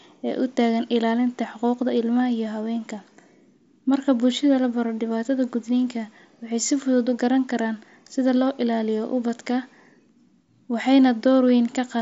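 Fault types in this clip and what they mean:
There are no fault types in this clip, so there is nothing to explain about what they mean.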